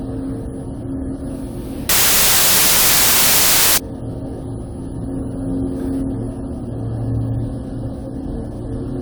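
The clip is a recording of sounds. From 1.89 to 3.78 s it shows a wrong sample width fault. That stretch turns into loud, hissing noise with the original sound buried underneath. The buried sound plays at half speed, so it is an octave low. This fits data written as 32-bit samples and read back as 16-bit. Each true sample splits into two values. One half carries the top bits of the signal. The other half carries only low-order bits, which sound like noise.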